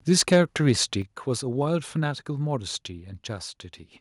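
From 0.11 to 0.38 s the speech breaks into a harsh, crackling edge, and again briefly from 0.68 to 0.71 s. This is microphone overload, likely from input gain set too high. The peaks run into the converter's ceiling, about 3 dB over in the first burst and right at the limit in the second, and their tops are flattened. A few percent of samples are clipped in the first burst, fewer in the second.

At 1.02 s the speech and the background together drop by about 5 dB in one sudden step, shortly after those distorted peaks. This points to the microphone volume being stepped down, likely by the call software reacting to the earlier clipping and lowering the device's input level.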